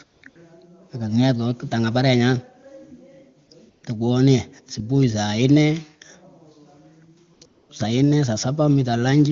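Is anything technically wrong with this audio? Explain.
Yes, AMR comfort noise fills the gaps at 0.03–0.21, 0.29–0.35 (just before "kenget kawah kutangah parengah"), 3.47–3.49, 3.69–3.83, 7.33–7.41 and 7.45–7.69 s. The phone decided nobody was talking and stopped sending speech frames, so the receiver swapped the real background for smooth synthetic hiss that keeps switching in and out.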